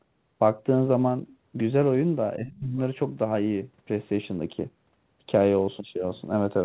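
A speech recording, band-limited with nothing above 4 kHz, which fits a narrowband call codec such as G.711 mu-law at 64 kbps. From 2.36 to 2.78 s the talker's level falls by about 25 dB at its deepest, over roughly 400 ms in all: speech suppressed in double talk, likely an echo canceller that could not tell the near talker from loudspeaker echo while both sides spoke and so attenuated everything. Inside that dip, from 2.48 to 2.59 s, a faint second voice sits around 20 dB below the speech. This is the other side's voice leaking through, likely residual loudspeaker echo that the canceller failed to remove from the microphone signal.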